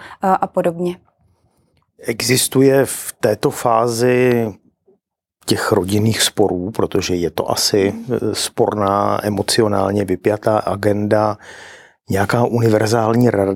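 At 4.32 to 4.34 s a single loud pop lands on the speech, peaking roughly ten decibels above the surrounding level. It is most likely an electrical transient, such as a plug, switch or static discharge, sending a brief voltage pulse into the chain, which the following circuits shape into a thump. Unlike a dropout, the speech carries on unbroken beneath it. Unlike digital clicks or crackle, it is one isolated event, not a repeating pattern.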